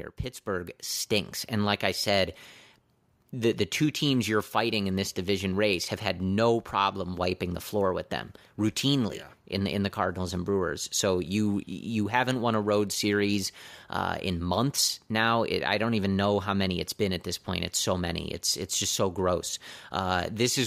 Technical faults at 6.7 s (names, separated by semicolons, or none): none